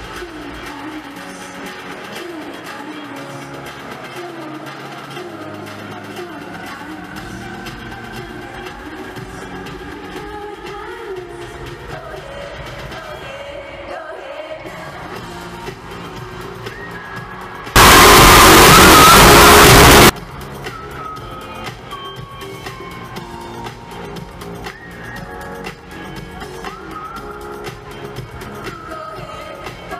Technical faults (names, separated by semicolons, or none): signed and unsigned mixed up